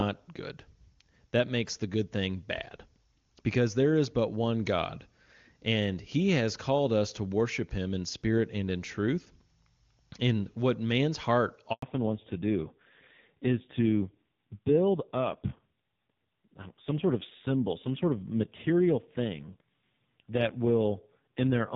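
At 11.72 s the speech dies away and stays silent for 100 ms until 11.82 s: a handover gap, where the call switched from one network to another and no speech frames arrived during the change. What was said during that tenth of a second is simply gone. Unlike packet loss with concealment, there is no smeared or buzzy stand-in filling the hole, just a short fade into true silence, heard only once at the moment the link changes.

From 11.82 s to the end, the speech has a fallback to narrowband. Before this point the HD Voice link carried clear wideband speech with faint or no codec damage. Afterwards nothing remains above 4 kHz, so sibilants lose their hiss and the voice turns muffled, and the added roughness points to a low-rate narrowband mode of about 6 kbit/s. A plain low-pass filter would only dull the sound. Here the texture also coarsens, and the change arrives abruptly right after the gap and never recovers.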